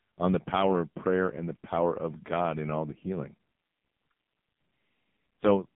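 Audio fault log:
throughout, AMR narrowband mobile codec: buzzy, synthetic speech with nothing above 3.5 kHz; heavy damage points to the low 5.9 kbps AMR-NB mode squeezing the vocal-tract model.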